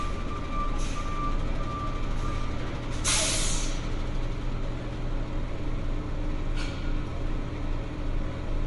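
Throughout, nothing sounds above 11.2 kHz. The sound turns watery and swirly. Likely MP3 compression, with a low bitrate near 48 kbps.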